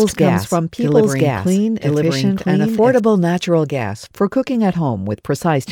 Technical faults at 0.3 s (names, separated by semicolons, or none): doubled audio track